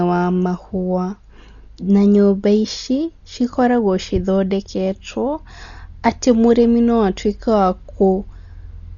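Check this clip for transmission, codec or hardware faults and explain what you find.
There's one problem, and it runs through the whole recording: heavy codec damage, most likely from Dolby Digital compression. Nothing comes through above 6.9 kHz, so the speech sounds dull and boxed-in. The rough, fluttery noise hanging around the tonal parts fits a starved encoder, one running at something like 40 kbps, that narrows the band and leaves many frequency lines with no real detail, so the decoder fills those gaps with noise.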